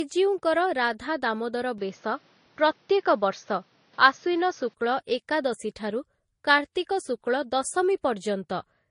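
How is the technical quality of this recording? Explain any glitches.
The recording has two faults: a lossy coding chain throughout, and a temporary drop to a poorer input.

Throughout the clip, the speech carries the traces of transcoding between lossy codecs, likely a low-bitrate MP3 re-encoded to Vorbis. The second encoder spends its bits on the first one's smearing and adds its own artefacts. Nothing survives above 10.6 kHz, so the top end sounds dull.

From 1.78 to 4.74 s, the input likely switched to a poorer device. The substitute passes nothing above 6.5 kHz, so the speech turns dull and boxy. It also brings a modest level shift and a faint new noise floor well below the speech. The change happens with no gap at either switch, and the clearer sound returns at 4.74 s.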